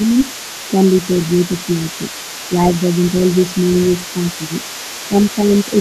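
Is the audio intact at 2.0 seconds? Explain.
No. At 2.0 seconds there are two things going on. First, the other side's voice is leaking through. It runs the whole clip, sitting roughly 20 dB under the talker as a faint second voice in the background. That's likely a loudspeaker on the talker's end feeding back into the mic, with the echo canceller leaving some of it behind, so you get a ghostly layer under the main speech.

Second, there's speech suppressed in double talk from 1.74 to 2.02 s, so 2.0 s falls right at its tail. The talker's level dips in patches adding up to around 150 ms, with the deepest drop being a modest few dB, roughly 5. The likely cause is both sides talking at once. The echo canceller can't tell the talker apart from the echo, so it turns the whole lot down briefly.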